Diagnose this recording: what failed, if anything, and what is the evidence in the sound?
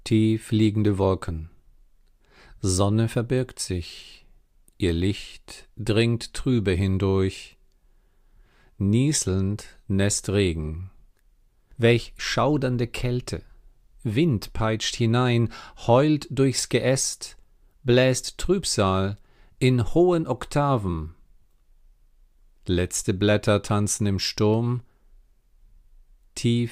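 Nothing failed: no stage from wiring to playback leaves audible evidence of a fault anywhere in the recording.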